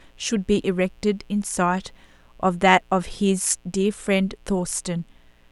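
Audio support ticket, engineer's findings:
Steady raspy buzz under the speech, whole clip, sitting low and well beneath the voice. Mains buzz at 60 Hz: switching spikes from a dimmer, rectifier or missing shield enter twice per cycle, spraying harmonics into the kilohertz range. Check grounding and shielding.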